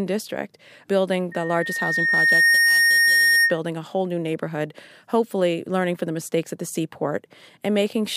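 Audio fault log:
1.31 to 3.59 s: loudspeaker feedback squeal. A single tone at 1.8 kHz rises out of the speech, swelling over roughly a second and a half to stand about 10 dB above it. The microphone is hearing its own loudspeaker, and at that frequency the loop gain exceeds one, so the tone keeps feeding itself.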